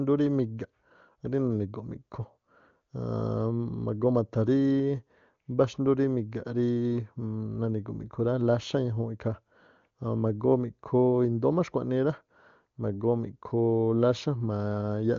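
No technical faults are audible.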